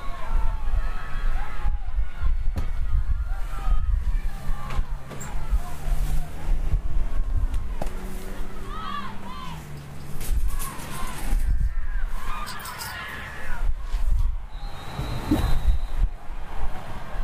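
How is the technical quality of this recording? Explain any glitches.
One glitch stands out. Frames out of order at 12.44–12.64 s: two neighbouring blocks of about 93 ms each play swapped, giving a garbled flutter. No time is lost.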